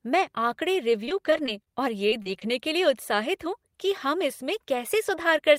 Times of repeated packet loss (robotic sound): 2.09-2.42

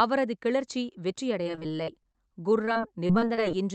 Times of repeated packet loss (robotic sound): 1.43-3.39

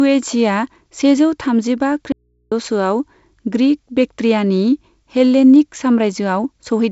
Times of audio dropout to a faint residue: 2.12-2.52

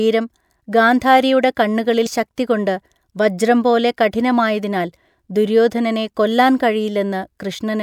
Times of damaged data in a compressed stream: 2.03-2.07

